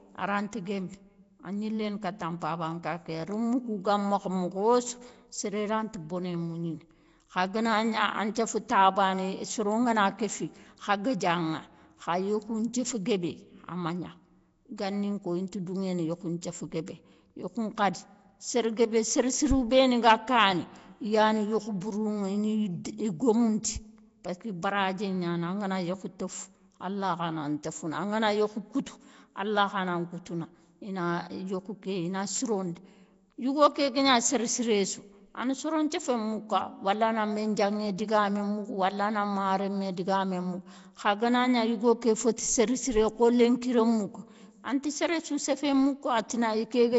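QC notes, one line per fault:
Throughout, Nellymoser compression: rough, hissy, underwater-sounding speech with nothing above 7.7 kHz. That's likely Nellymoser Asao noise-filling starved bands, and fits roughly 32 kbps.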